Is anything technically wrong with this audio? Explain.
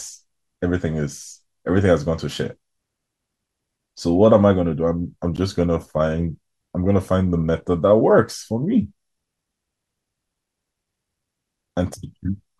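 Yes. At 5.36 s the speech drops to silence for 14 ms, then resumes. This is likely a Bluetooth stall, where delayed packets briefly emptied the headphones' buffer.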